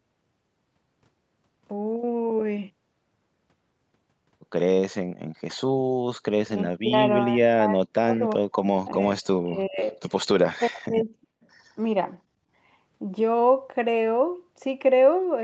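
An echo canceller that likely could not tell the near talker from loudspeaker echo while both sides spoke at once turned the speech down, producing speech suppressed in double talk. The sound ducks sharply, by about 40 dB at its deepest, at 5.78–5.92 s, 6.25–8.63 s, 9.37–9.96 s and 10.52–11.26 s, and more gently, about 20 dB, at 8.92–9.2 s. Syllables fade or drop out in pieces.

Soon after, at 11.42–11.47 s, an echo leak appears, likely because the far side's canceller let some of its loudspeaker pickup through. A faint copy of the speech, around 40 dB below it and delayed by 374 ms, comes back as a brief scrap.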